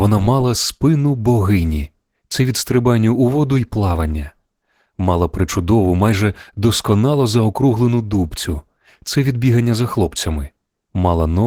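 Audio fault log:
throughout: Opus voice compression. The speech passed through Opus in hybrid mode, with SILK coding below 8 kHz and a sparse CELT layer above, at a rate fitting about 16 kbps. The coarsely coded excitation leaves the speech plainly hoarse, muffled and slightly robotic.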